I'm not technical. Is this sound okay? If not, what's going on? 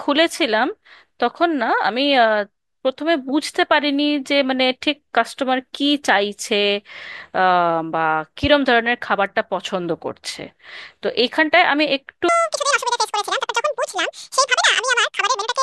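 No. From 12.29 s to the end at 15.63 s, there is a section at the wrong speed. That last part of the speech plays twice as fast as it should. Because speed and pitch move together, the voice also jumps up in pitch by about ten semitones. It sounds hurried and squeaky, like a chipmunk. The likely cause is an editor or player running that part on the wrong clock.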